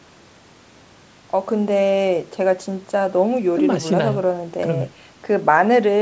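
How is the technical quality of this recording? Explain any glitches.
No glitches or faults heard.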